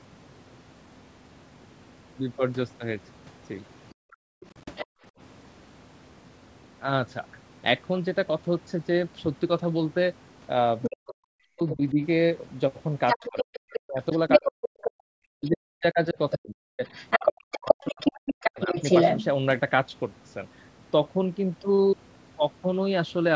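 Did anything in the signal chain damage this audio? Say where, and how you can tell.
Yes. Background gated by the echo canceller at 3.94 to 5.12 s: room sound drops by up to about 40 dB for roughly 0.7 s in total. The call processing stage's echo canceller clamped the microphone while the loudspeaker played, then released it.

Other side's voice leaking through at 4.11 to 4.85 s, 10.82 to 11.75 s and 13.07 to 19.24 s: a second voice sits well below the talker at first, closer by 11 s, and louder than the talker in the long final stretch. The likely cause is the echo canceller failing to subtract the far-end loudspeaker signal from the microphone.

Speech suppressed in double talk at 10.89 to 11.99 s and 13.15 to 18.72 s: the talker's speech dips by as much as 40 dB, for about 1 s and then about 4 s in total, overlapping the leaking far-end voice. With both sides active, the canceller likely turned down everything, including the near talker.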